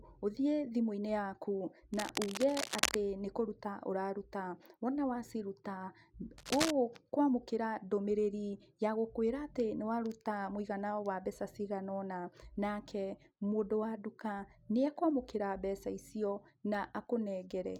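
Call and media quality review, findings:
Cable scratch noise, 1.94–2.95 s: dense, uneven crackle and rustle over the speech, roughly 5 dB below it. Likely a worn cable, connector or control being moved, with contact resistance fluctuating rapidly and injecting noise bursts.

Cable scratch noise, 6.38–6.71 s: same scratching texture, shorter burst, about as loud as the speech. Points to a worn cable, connector or control being moved.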